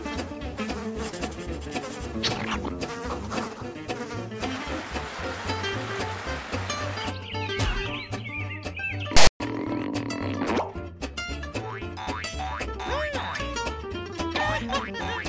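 A hard-edged burst of loud, rasping static cuts into the audio at 9.17 s and runs to 9.40 s, lopsided as if pushed to one side of the waveform, and it drops to dead silence before the sound resumes. This is file tags played as audio: a block of text metadata was decoded as samples, its character bytes giving the offset rasp and the zero padding behind it giving the silent stretch.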